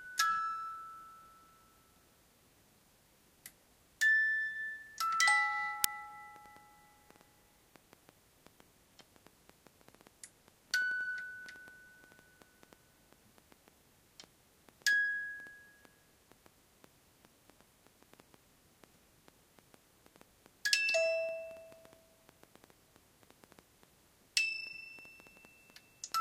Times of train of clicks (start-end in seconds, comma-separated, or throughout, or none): 6.36-26.13